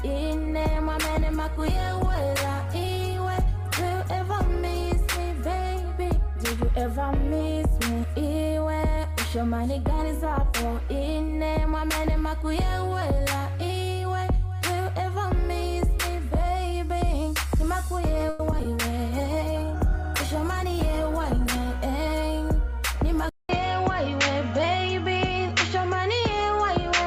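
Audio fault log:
0.47–4.95 s, call bitrate drop. The encoder's rate falls from 96 kbps to 17 kbps and stays at that floor for about 4.4 s. With so few bits, the sound is coded much more coarsely, and at a rate this low the high frequencies are trimmed as well. The detail lost in the quantising makes the sound rougher and more muffled. The quality returns once the rate recovers near 4.95 s.
18.29–18.66 s, repeated packet loss (robotic sound). Four gaps land in quick succession in under 0.4 s, the longest 100 ms. About 130 ms is patched by stretching the preceding sound forward. Another 60 ms is simply missing. Roughly 35% of the span is concealment rather than real signal. The constant patching and the holes give a choppy sound with pieces dropped out.
19.13–21.84 s, call bitrate drop. The rate again falls from 96 kbps, this time to 18 kbps, and holds near the bottom for about 2.7 s. The coarser coding and trimmed top end return for this stretch, then clear as the rate climbs back.
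20.44–21.41 s, jitter buffer speed-up. Inside the low-bitrate stretch, the receiver trims a backlog by cutting short pitch-period slices many times over. A few tens of milliseconds are removed in total. The audio runs at about 103% speed with its pitch unchanged. That is a modest push, below the point where it usually sounds clearly hurried.
23.29 s to the end, input switched to a poorer device. There is a 200 ms silence at the switch. After it, nothing above 7.6 kHz comes through, so the top end is gone from that point on. A new noise floor sits far below the signal, and the level stays about the same. This abrupt change of band and background most likely comes from a change of input device.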